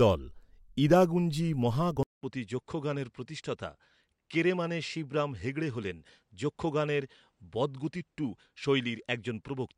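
At 2.03 s the speech drops out for about 200 ms, then returns duller and a little quieter, roughly 5 dB down, with nothing above about 9.8 kHz and a faint new background noise far beneath the voice. It stays that way to the end. The likely cause is an input switched to a poorer device partway through: the replacement device passes a narrower band and brings its own level and noise floor.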